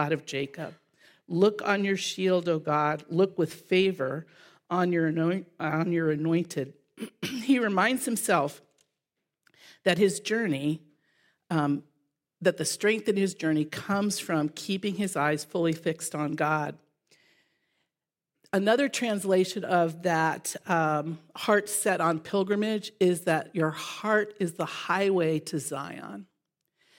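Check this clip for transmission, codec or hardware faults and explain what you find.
No faults turn up anywhere in this clip.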